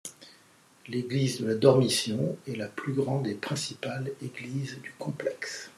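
Nothing stood out on listening to this speech recording.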